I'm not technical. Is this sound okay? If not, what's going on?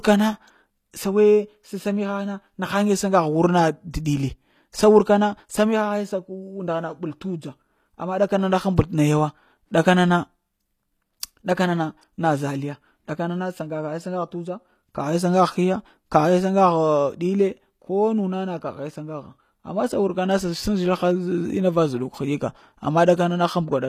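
No. All the way through, the speech has a gritty, metallic edge, and the s sounds come out lispy or fizzy rather than crisp. The brightness is there but sounds artificial. The likely cause is HE-AAC compression, a format that saves space by storing only the lower part of the sound properly and rebuilding the treble by copying lower parts upward. That rebuilt treble doesn't quite match, and nothing at all remains above about 14.9 kHz.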